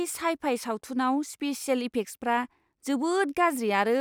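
Nothing in this bit of speech stands out as a technical fault; it just rolls along without any glitch worth pointing at.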